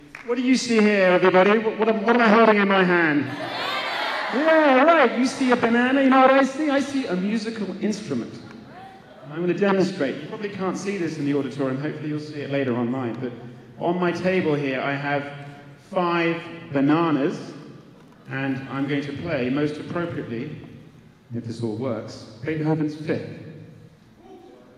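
No technical faults can be heard anywhere in this clip. Nothing in the audio points to a problem in the signal path.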